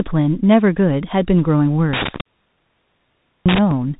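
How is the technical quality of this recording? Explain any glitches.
The recording is poor: narrowband Bluetooth codec damage runs through the whole speech clip, and a loose connection breaks it up in the second half.

Throughout, the Bluetooth CVSD headset codec is plainly audible. Nothing above 3.8 kHz survives, and the grainy, slope-limited character fits a 64 kbps CVSD link. The codec sends a single up-or-down bit per sample with an adaptive step, so sibilants turn scratchy, loud bright passages smear, and a granular hiss sits under the speech. Unlike a plain low-pass or a low-bitrate transform codec, it adds that rough hiss rather than warbling or swirling.

From 1.93 s to 3.71 s there is an intermittent contact fault. A loose plug or cable keeps breaking the circuit, for about 1.25 s of open time in total across that stretch. Each break cuts the sound out abruptly, with crackle at the edges, leaving only faint hiss or hum. 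Those crackling edges and the irregular, physical timing set it apart from clean digital dropouts or packet loss, which go silent without the scratchy transitions.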